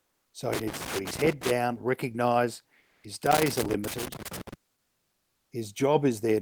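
From 0.53 to 1.51 s, an irregular scratchy crackle breaks over the speech. This is loose connector crackle: a worn or dirty contact keeps making and breaking as it shifts, chopping the signal, and any DC on the line turns each break into a pop.

Between 2.79 and 3.03 s, the background, sitting about 42 dB below the loudest speech, turns into a flat, featureless hiss about 3 dB quieter for roughly 240 ms. This is comfort noise in place of the background, likely from Opus discontinuous transmission: the sender stopped sending during the pause, and the receiver filled the gap with synthetic noise.

The connector crackle returns from 3.26 to 4.54 s with the same ragged, intermittent scratching as the contact cuts in and out again.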